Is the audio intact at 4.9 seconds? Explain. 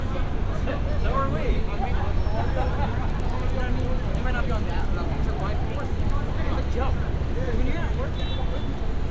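No. At 4.9 s the sound falls inside a stretch from 3.1 to 6.15 s where the resampler restarted on every block. Each 50 ms block was converted from 44.1 kHz down to 16 kHz in isolation, so the filter at every block edge lacked the real neighbouring samples and left a small discontinuity. Those errors repeat at 20 Hz, giving a steady ticking, close to a low buzz, that rides on the signal throughout that span.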